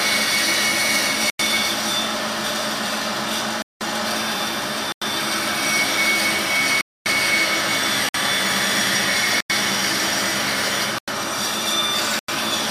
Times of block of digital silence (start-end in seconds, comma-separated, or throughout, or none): 1.30-1.39, 3.62-3.81, 4.92-5.02, 6.81-7.06, 8.09-8.14, 9.40-9.50, 10.98-11.08, 12.19-12.28